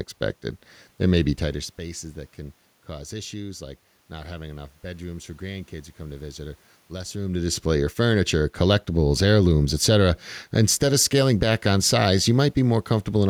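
The speech recording has no technical faults: the steady room noise belongs to the space where it was recorded, and the level changes around 1.5 s and again near 7 s come from the talker shifting position relative to the microphone, not from the signal chain.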